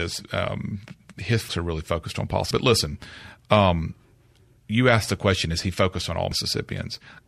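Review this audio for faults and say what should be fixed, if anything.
At 2.51 s and 6.32 s the speech jumps forward, losing about a tenth of a second each time with no gap. This is likely a dropped buffer (overrun), where unread samples were overwritten. Giving the capture thread higher priority or larger buffers prevents it.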